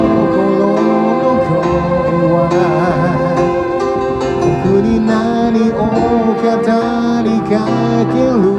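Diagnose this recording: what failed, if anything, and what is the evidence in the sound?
Nothing failed; no faults heard.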